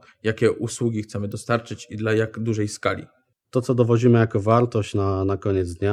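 At 1.32 s, between "jakie usługi chcemy" and "i dla jak dużej", a sharp snap sits on top of the speech. This is an electrical switching spike. A nearby switch or motor likely arced, and the audio line picked it up. The spike peaks around -25 dBFS.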